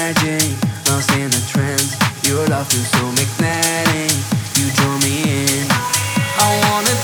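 No technical faults can be heard anywhere in this clip. There is nothing to place on the timeline or explain.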